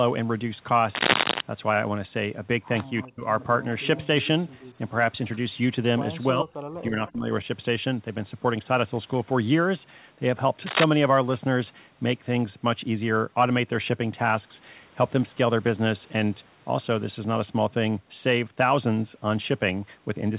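From 0.93 to 1.42 s a burst of dense, uneven scratching sits over the speech, a little louder than the speech itself, and it returns more briefly from 10.66 to 10.84 s at about the same level as the speech. This is cable scratch noise, likely from a worn cable, connector or control being moved so that its contact resistance jumps about rapidly and injects ragged noise into the signal.

At 3.02 to 3.08 s a faint scrap of voice arrives 311 ms behind the original, and a longer, slightly stronger stretch follows from 4.49 to 4.82 s. Both remain well below the main speech. This is echo leak: the far end is likely playing the call through a loudspeaker, and its echo canceller let part of what its microphone picked up pass back down the line as a delayed copy.

Overlapping the first echo, from 3.06 to 3.25 s, the speech drops almost to silence. It does so again from 6.42 to 6.53 s, then dips more gently and unevenly from 6.73 to 7.28 s. 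This is speech suppressed in double talk. With both sides likely talking at once, the echo canceller could not tell its own talker from the loudspeaker echo, so it pulled the level down on both, cutting the voice out in pieces.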